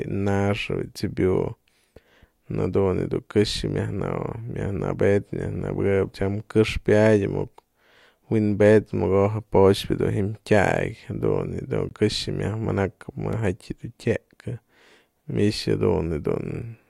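At 11.89 s the speech drops out for about 19 ms as a block of digital silence, and at 13.33 s a second, much shorter block of roughly 3 ms follows. In each case the sound cuts out and back with no fade, most likely because the output buffer was not filled in time. The longer gap reads as a brief hole, the shorter as a single sharp tick.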